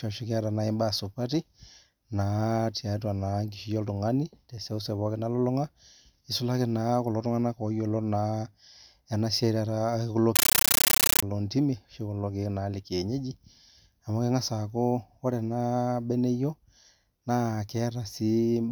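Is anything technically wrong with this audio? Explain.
Yes. From 10.36 to 11.23 s the speech is replaced by a compressed stream played as audio. An AC-3 bitstream, whose density points to a high-rate stream of around 640 kbps, reached the output as raw samples instead of being decoded. Each frame becomes a 13.3 ms burst of noise followed by silence, repeating 31.25 times a second, heard as loud, harsh chattering static. On a waveform this shows as dense blocks separated by flat gaps, and on a spectrogram as broadband vertical stripes spanning the whole frequency range.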